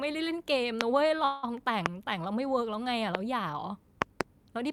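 A sharp loud pop lands at 0.81–0.83 s, standing roughly 25 dB above the speech, which carries on beneath it. The likely cause is a sudden voltage pulse from a plug, switch, static discharge or driver glitch entering the signal chain.

At 1.07–1.17 s comes a short stall from a late packet. The sound is briefly held too long with a faint buzz or dip. The packet arrived late, the jitter buffer emptied, and the receiver stretched about 26 ms of audio before resuming, adding about 10 ms with nothing lost.

From 1.25 to 1.45 s a call audio freeze sustains the last sound as a fading buzz or hiss for about 181 ms, then the speech resumes where it stopped. Packets were likely held up in transit, draining the jitter buffer, so a gap was inserted rather than audio dropped.

Further loud pops follow at 1.86–1.88 s (about 25 dB), 3.15–3.17 s (about 20 dB), and a double pop at 4.02–4.23 s (about 25 dB).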